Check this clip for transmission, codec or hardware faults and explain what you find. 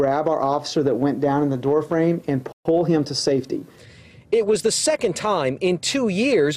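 Two related playback faults sit together just after the 2.5 s mark.

From 2.52 to 2.65 s there is a playback stall: the output drops to silence for about 130 ms in mid-flow. The likely cause is the player running short of buffered data, or its output thread being briefly blocked, so nothing reached the device until it recovered.

From 2.65 to 3.93 s a time-compressed catch-up follows. Having fallen behind during the stall, the player works off the backlog by trimming small segments and cross-fading across the joins, running at 1.1 times normal speed for about 1.3 s. Pitch stays where it should, but the audio sounds slightly rushed, settling back to normal pace once the delay is recovered.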